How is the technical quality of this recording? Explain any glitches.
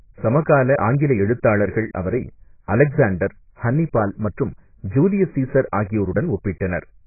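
Quality is poor throughout, with heavy codec damage across the whole speech clip.

AAC compression, from start to finish: nothing survives above about 2.5 kHz, so the speech sounds dull and muffled, with sibilants smeared into a fizzy, warbling texture. This is likely AAC-LC at a very low bitrate, around 12 kbps, where the encoder drops the upper spectrum and coarsely quantises what remains.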